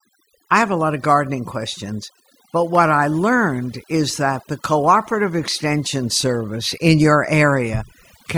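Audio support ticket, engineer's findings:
Overdone noise removal, present throughout the speech. Background drops between phrases, broken by twinkling specks. Probable component: noise reduction stage set far too aggressive. Mechanism: bands near its noise estimate pulled down or gated off, taking quiet speech detail with them. Spectrogram: scattered isolated bright dots on a dark floor, speech harmonics patchy. Waveform: gaps lowered.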